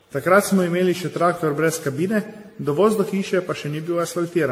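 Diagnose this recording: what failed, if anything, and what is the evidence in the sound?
The failure sits at the codec stage and runs through the whole speech clip: the sound is swirly and hollow, with smeared consonant attacks and a watery, shifting texture, and the spectrum stops dead at about 16.6 kHz. That combination is worse than a single AAC-LC encode at 64 kbit/s would produce, which points to generation loss, likely from around fifteen decode-and-re-encode passes, each requantising on a shifted frame grid so the artefacts stack.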